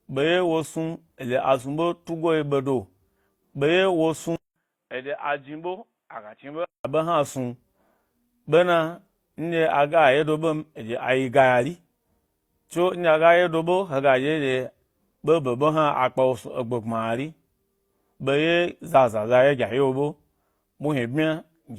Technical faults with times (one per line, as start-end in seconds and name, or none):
4.36-6.85 input switched to a poorer device